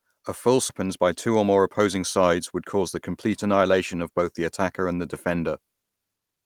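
At 0.69 to 0.71 s about a second of queued audio was dropped, a skip ahead: playback jumps straight to later sound with no gap filled, so the two sides of the missing stretch butt together abruptly.

From 0.83 to 4.2 s the buffer, still holding more than its target, ran a jitter buffer speed-up, trimming short pitch-period slices again and again, about a third of a second in total. The speech plays roughly 8% fast at unchanged pitch and sounds hurried.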